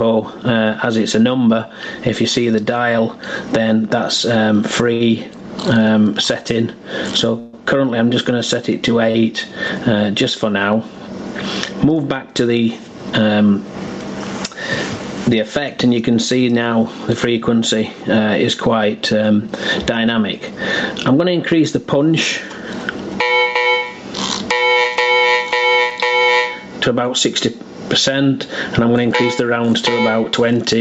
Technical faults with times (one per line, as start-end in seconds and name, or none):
0.00-30.81 gain pumping
4.93-5.01 short stall from a late packet
7.39-7.54 call audio freeze
9.11-9.15 short stall from a late packet
18.95-23.13 jitter buffer speed-up
23.73-25.92 scattered short gaps